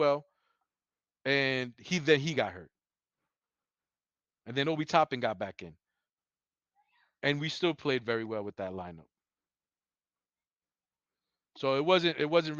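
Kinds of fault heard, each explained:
No technical faults can be heard in this recording.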